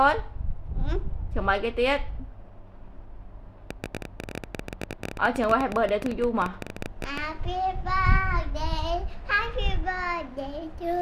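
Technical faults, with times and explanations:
3.71–7.19 s, train of clicks: around fifty near-identical sharp pulses arrive at about 14.4 per second with uneven spacing, standing roughly 10 dB above the surrounding sound and ticking through quiet moments as well as louder ones, most likely from interference from nearby equipment or a faulty connection. The clicks sit on top of the audio rather than replacing stretches of it, and their shape stays the same from one to the next.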